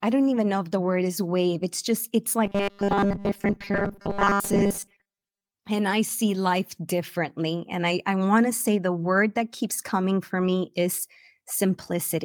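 From 2.45 to 5.54 s the speech turns into a rigid, metallic buzz pitched at 200 Hz, still loosely tracking the words. That's robotic sound from repeated short buffers, likely from audio arriving too slowly and a 5 ms chunk being looped over most of that stretch instead of the real signal.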